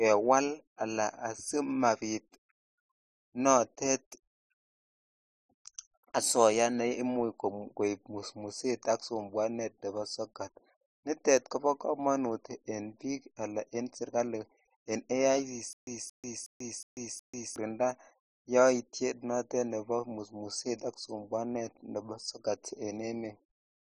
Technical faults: stutter with silent gaps

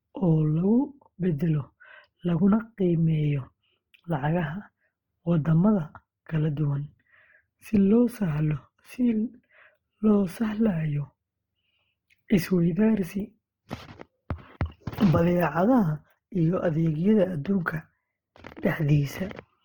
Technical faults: Opus compression

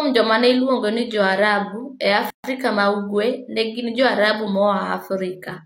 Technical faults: gap at a join of encoded pieces

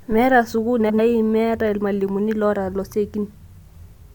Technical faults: frames out of order

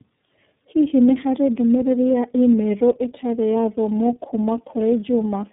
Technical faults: tandem speech coding

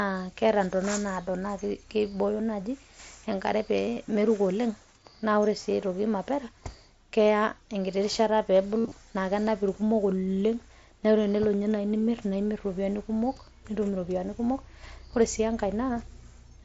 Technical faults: concealed Bluetooth headset packet loss

